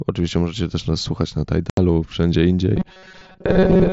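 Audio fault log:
1.70–1.78 s, unconcealed Bluetooth headset packet loss: after "też nas słuchać na", about 75 ms of headset packets vanished unreplaced, leaving an abrupt hole.
2.76–3.93 s, robotic sound from repeated short buffers: audio likely arrived too seldom, so short buffers were repeated for most of the stretch, imposing a rigid metallic 188 Hz buzz.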